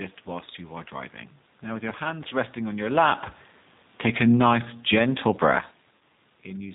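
Speech runs through the G.729 codec for its whole length: nothing above 4 kHz, a rough, slightly synthetic timbre and warbling room noise, which fits an 8 kbit/s pulse-coded stream rather than plain band-limiting. VoIP packet loss concealed by the speech codec appears at 2.29–2.33 s and again at 5.97–6.01 s. The decoder stretches the last sound into a fading buzzy tone or coloured noise over gaps of 20 ms and 40 ms, which points to one and then two lost packets. That smeared fill sets it apart from a clean dropout of silence. Automatic gain falling lowers the level by about 4 dB between 3.95 and 5.61 s. Voice and room noise sink together, unlike the talker's own movements near 3 s and 5.5 s, where only the voice changes.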